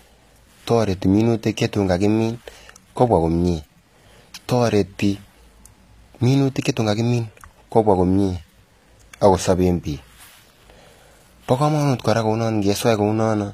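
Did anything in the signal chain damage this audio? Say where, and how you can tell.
Yes, at the codec stage: the whole clip has gritty, lispy sibilants and nothing above 14.9 kHz, likely HE-AAC compression rebuilding treble from copied lower bands at a low bitrate.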